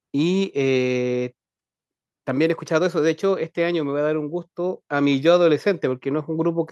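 No technical faults can be heard anywhere in the speech recording. Nothing in it calls for a timed entry, so there is no sequence of events to report.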